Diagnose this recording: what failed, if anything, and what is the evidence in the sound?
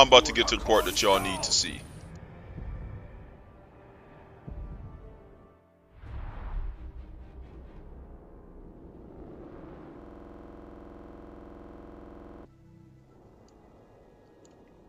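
A system hang loop at the driver or buffer stage. From 10.02 to 12.45 s the audio stops moving forward and one 46 ms slice repeats about fifty times, giving a rough stutter-buzz at 21.5 Hz. The host froze while the hardware kept replaying its ring buffer, which fits a 2048-sample buffer. The waveform shows identical blocks tiled end to end. The spectrogram shows frozen, vertically striped content with comb-like harmonics spaced 21.5 Hz apart.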